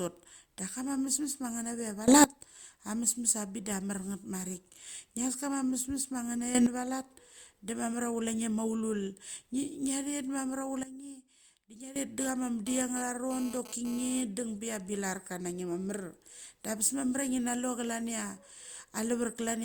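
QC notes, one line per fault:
2.08–2.24 s, 6.55–6.66 s, 10.83–11.96 s, sudden gain jump: gain likely stepped instantly without a ramp; speech and background noise jump together, up about 19 dB, up about 11 dB, then down about 14 dB.
12.20–14.22 s, GSM phone buzz: a nearby 2G phone's data-transfer bursts at 217 Hz are rectified by the audio circuit, adding an intermittent raspy harmonic buzz about 14 dB below the speech.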